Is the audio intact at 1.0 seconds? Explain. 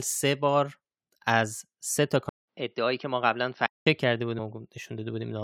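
Yes, the speech at 1.0 seconds is intact, with no audible fault at that moment.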